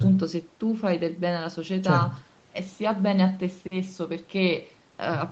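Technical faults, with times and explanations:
No technical faults can be heard in this speech.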